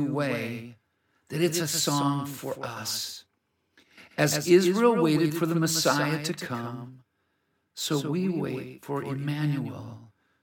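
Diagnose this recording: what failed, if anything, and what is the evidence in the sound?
A doubled audio track runs throughout: a clean full-band copy trails the speech by around 150 ms, roughly 10 dB down, with no decay or room colour. Spectrograms show each onset repeated faintly later. Likely cause: a slower second capture path at the driver stage.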